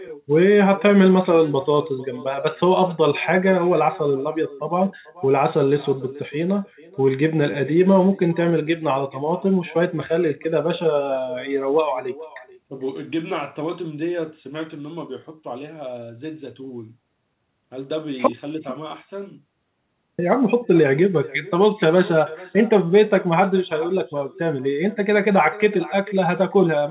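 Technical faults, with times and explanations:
throughout: echo with no canceller. The far end's microphone recaptures loudspeaker playback unremoved, so speech returns roughly 0.4 s later as a thin copy about 21 dB quieter.
throughout: clock drift between sender and receiver. The sender's clock runs slightly slow, around one and a half percent, so the receiver's jitter buffer keeps draining and the timing wobbles unevenly.
0.15–26.81 s: repeated timing corrections. The receiver keeps repeating short pieces to cover the slow sender, playing at 99% speed and adding roughly 0.4 s.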